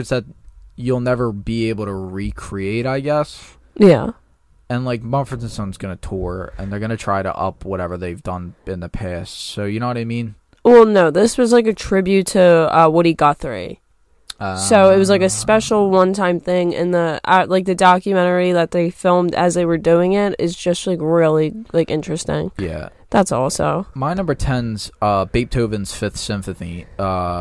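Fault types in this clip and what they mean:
No faults can be heard anywhere in this recording.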